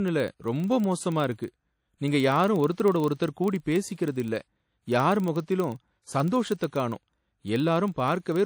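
Right from the start the speech has that ringing, washy character with a hiss that swells and fades along with the talker, plainly audible throughout. It's most likely WMA compression from an early encoder at a low rate, something around 48 kbps.

Underneath that there's a steady 25 Hz buzz that gets louder and softer with the speech level. That's the filter restarted on every block: it drops its state each time, so every 40 ms block opens with a little transient click.

Then at 6.67 to 6.73 s, just after "இல்ல யார் முகத்திலும் சந்தோஷத்த", there's a pre-echo. A short hiss of about 54 ms creeps in before an attack and blurs it. The codec has spread noise sized for the loud moment back into the quiet bit before it.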